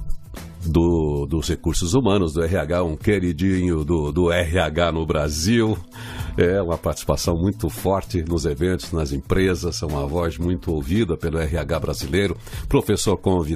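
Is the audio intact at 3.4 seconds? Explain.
Yes, at 3.4 seconds the audio plays through intact, with no dropout, click, distortion or other fault audible at that point.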